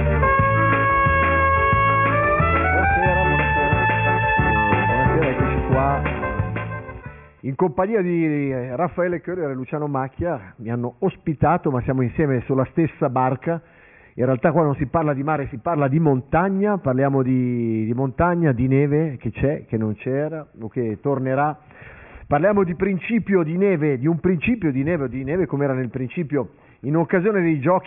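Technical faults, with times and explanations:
No technical faults can be heard anywhere in the audio, and the signal stays steady and intact throughout.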